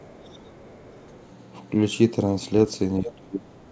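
A speech recording that has passed through a call link, with nothing above 8 kHz, which fits a G.722 codec at 64 kbps. From 0.00 to 0.50 s and again from 0.68 to 1.19 s, a faint second voice sits under the talker. This is other side's voice leaking through. It is very quiet, about 30 dB below the speech in the first stretch and about 35 dB below in the second. The likely cause is the far end playing on a loudspeaker, and the echo canceller not clearing all of it from the microphone. From 3.02 to 3.51 s, about half a second, the talker's level falls away sharply, by as much as about 30 dB at its deepest. This is speech suppressed in double talk. The likely cause is both sides speaking at once. The echo canceller could not tell the talker from the returning echo, so it turned everything down.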